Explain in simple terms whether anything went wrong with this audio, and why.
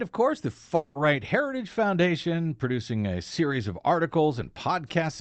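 A long network dropout is the likely cause here: from 0.75 to 0.97 s, a fifth of a second of audio never arrived. The receiver papered over the gap by stretching the last sound into a fading buzz or hiss, and that missing moment never comes back.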